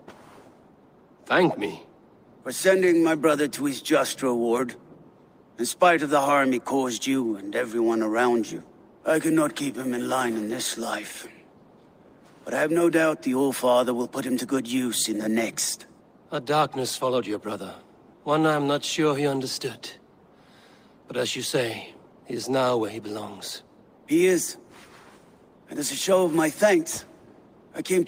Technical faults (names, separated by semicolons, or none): none